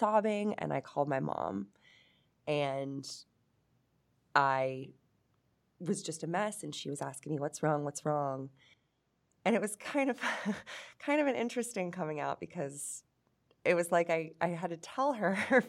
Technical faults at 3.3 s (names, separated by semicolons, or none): none